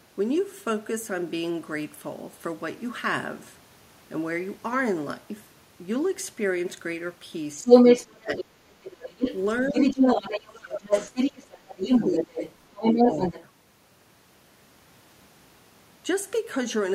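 From 7.62 to 13.45 s, the echo canceller likely failed to remove the far end's loudspeaker playback from the microphone, so the other side's voice leaks through. It sits at or slightly above the talker's level for nearly six seconds. Over that same stretch, speech is suppressed in double talk, likely because the canceller cannot separate the talker from that echo and turns both down. The talker's voice drops deeply, by tens of decibels, at 7.62–8.64 s, 9.7–10.87 s and 12.05–13.35 s.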